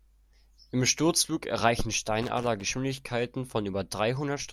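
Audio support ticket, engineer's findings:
Loose connector crackle, 2.22 to 2.63 s in the speech. Irregular scratchy burst lasting about 0.4 s. Probable worn or dirty cable contact. It makes and breaks as it shifts, chopping the signal, with pops where DC sits on the line.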